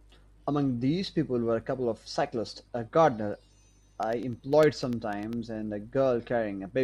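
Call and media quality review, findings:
Periodic USB or driver dropouts, 3.33–5.33 s: ticks every 0.1 s, sub-millisecond silent gaps from a blocked bus; evenly spaced waveform notches, thin spectrogram lines.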